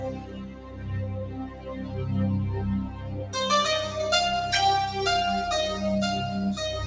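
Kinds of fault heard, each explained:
Noise suppressor applied to music or sounds: A speech-oriented noise reduction stage is active on material it was not designed for, so it treats sustained, steady parts of the sound as background and pulls them down while leaving onsets largely intact. Here the gain swings by around 10 dB over the clip, giving an audible pumping and thinning as held portions sink. The audio stops at 8 kHz, which fits a G.722 call path at 64 kbps.
Sound cut by the noise suppressor: In specific passages the suppressor misjudges the sound as noise and attenuates it more heavily than the surrounding audio, so steady or decaying content drops away while transients survive. This happens three times: 0.11 to 0.89 s, falling by about 9 dB at its deepest; 1.25 to 1.94 s, by about 8 dB; and 2.85 to 3.34 s, by about 7 dB. Each dip lasts roughly half a second to 0.7 s and is heard as a sagging, hollowed level.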